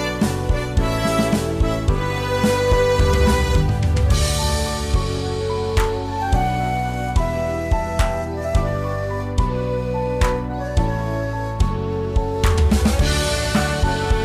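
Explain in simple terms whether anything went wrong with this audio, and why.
Nothing went wrong that could be heard: listening closely, there is no moment in the whole recording that stands out as a problem.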